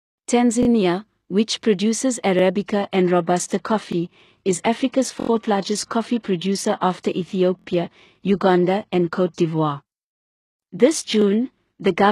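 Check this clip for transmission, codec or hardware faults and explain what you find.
Two faults are present: recurring repeated-buffer stutters and a switch to a lower-bitrate adaptive stream.

Repeated buffer at 0.63, 2.39 (just after "which produces"), 3.92, 5.2, 7.59 and 11.22 s. Late audio made the device replay its last 23 ms block, which fits a 1024-sample buffer. Unlike a dropout there's no gap, just the same fragment stuttering with hard joins.

Adaptive stream at a lower bitrate from 2.66 s, right after "which produces", to the end. The connection slowed, so playback switched versions. Nothing is left above 12.4 kHz, pointing to a low-bitrate HE-AAC stream. Unlike a plain filter, the change is sudden and gapless.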